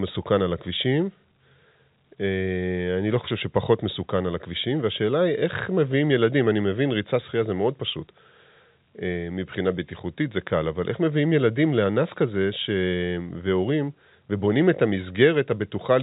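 Speech, with no technical faults to report.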